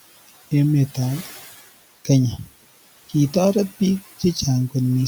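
Noise suppressor artifacts run through the whole speech clip. The suppressor pulls noise-dominated bands down by about 16 dB frame by frame, so the room noise, about 19 dB below the speech, drops away in pauses and swells back up whenever speech resumes.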